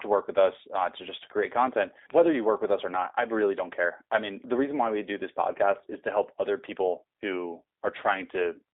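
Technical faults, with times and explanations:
throughout G.729 codec: the speech is confined to roughly 300 Hz to 3.7 kHz and sounds plainly rough and synthetic. Unlike a simple band-limit, it carries a buzzy, rebuilt quality because each 10 ms frame is resynthesised from a filter, pitch and a few pulses, which fits an 8 kbit/s coder.
4.12 to 4.14 s loud pop: between "i really don't care" and "mean the reason why" a single sharp pop, peaking about 10 dB above the speech, sits on top while the speech continues underneath. Unlike a dropout or click train, nothing is lost. A voltage step from a plug, switch or static is the likely cause.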